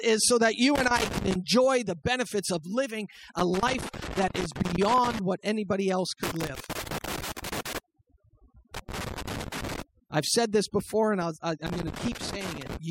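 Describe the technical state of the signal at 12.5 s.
At 12.5 s the signal carries loose connector crackle, part of a burst running from 11.67 s to 12.77 s. A worn or dirty contact is making and breaking rapidly, chopping the signal in and out, and any DC present on the line turns each break into a pop. The result is an irregular, scratchy crackle laid over the speech, uneven in spacing and level rather than a steady tone or hum.

Overdone noise removal is also active at this point, as it is across the whole clip. The noise reduction is set too aggressively, so individual frequency bands near its noise estimate are pulled far down or switched off, and quieter components of the speech are removed along with the noise. The background drops and breaks up into twinkling, chirpy specks.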